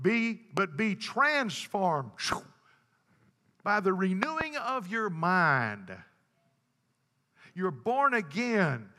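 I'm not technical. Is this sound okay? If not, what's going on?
No. A loud pop jumps out at 0.57 to 0.60 s and 2.32 to 2.35 s, with a double pop at 4.23 to 4.43 s. Each is a sudden electrical jolt, likely from a plug, switch or static, sitting on top of the speech, which continues underneath.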